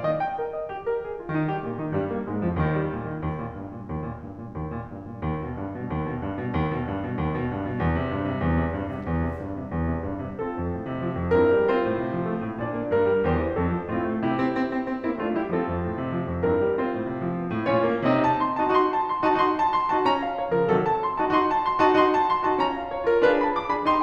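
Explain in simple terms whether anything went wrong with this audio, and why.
Something in the recording chain picked up electrical interference from the power supply, a fault called mains buzz. A dimmer, rectifier or poorly shielded cable let sharp spikes from the 50 Hz mains into the signal, twice in every cycle. Those spikes carry many higher tones, so under the music you hear a steady, raspy buzz rather than a smooth hum. It sits quietly in the background and runs unchanged through the whole piece.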